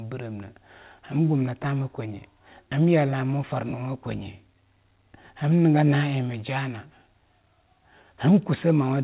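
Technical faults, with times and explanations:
No technical faults detected.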